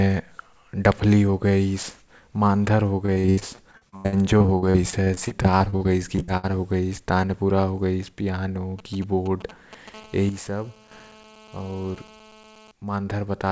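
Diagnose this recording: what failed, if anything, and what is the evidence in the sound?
At the network stage, packets were lost or arrived too late over and over between 3.06 and 6.45 s, which is repeated packet loss with a robotic sound. The jitter buffer covered about 30 separate holes by stretching the last piece of audio, so roughly a quarter of that span is patched sound and the longest hole runs to 81 ms. The speech there turns choppy, with fragments missing and the next dropout arriving before the previous one has settled.

In the analogue wiring, a 2G handset close to the equipment began signalling from 8.79 to 9.89 s, and these were GSM signalling bursts. The audio circuitry rectified the short groups of radio pulses, so at around 217 Hz the recording picks up a galloping dit-dit-dit pattern of brief buzzes, sitting roughly 20 dB below the speech. The pattern points to a phone preparing for a call or message rather than one already connected.

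From 9.94 to 12.71 s the same kind of phone was in an active call, which gives a GSM phone buzz picked up through the analogue wiring. Its radio transmits in bursts at 216.7 Hz. Once rectified, those bursts become a continuous, harsh, raspy buzz rich in harmonics, about 24 dB below the speech. The buzz runs steadily under the talking and bears no relation to what is said.

Between 10.29 and 10.91 s the level drops abruptly by 7 dB, which is a sudden gain jump. The speech and the background noise fall together in a single step rather than fading down. This step change points to a digital gain setting applied without a ramp, likely somewhere in the call processing or driver stage. The G.722 call codec band-limits everything to 8 kHz, so nothing in this clip extends above that.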